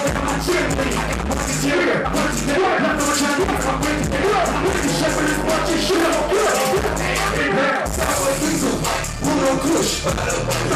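Short skips occur at 3.11, 5.09, 7.07 and 9.04 s, roughly every 2 seconds. Each drops about 20 ms, likely audio missing between chunks, with the edges joined directly.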